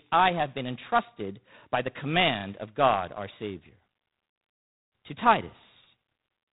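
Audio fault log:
Throughout: G.726 ADPCM. The speech carries a harsh, rasping hiss that rises and falls with the level of the sound, and nothing passes above about 3.9 kHz. The coder sends only a few bits per sample describing the gap between each sample and an adaptive prediction, so the quantisation error rides on the signal itself. That much grit fits the 24 kbit/s mode. A plain low-pass filter would dull the top without adding hiss, and a perceptual codec would swirl or warble instead.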